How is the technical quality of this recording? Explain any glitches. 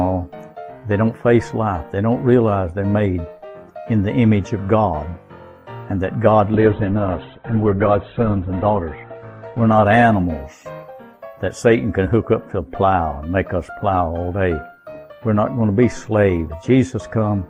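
There is one glitch: a call bitrate drop from 6.54 to 12.72 s. The encoder's rate plunged, with coarser coding and bandwidth narrowing from 20 kHz to 4 kHz. The audio turns muffled and rough, worst for about 2.1 s, consistent with roughly 48 falling to 10 kbps.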